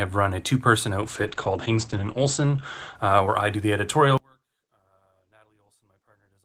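From 1.03 s to 3.69 s the sound turns rough and muffled, with a watery, smeared texture, and it is at its worst for about 1.3 s before clearing. This is a call bitrate drop. The estimated bandwidth fell and the encoder went from 32 kbps down to 11 kbps. At that rate it codes everything more coarsely and trims the top end, so the audio band shrinks from 20 kHz to about 8 kHz.

From 4.18 s to the end, the sound nearly disappears, falling by about 39 dB and leaving only a faint residue. It most likely has one channel inverted. With one side's polarity flipped, anything the two channels share cancels when they are combined to mono, and what remains is only the small difference between them. That is why the level collapses rather than just thinning out.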